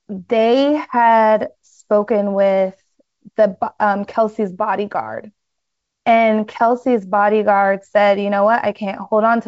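No technical faults are audible.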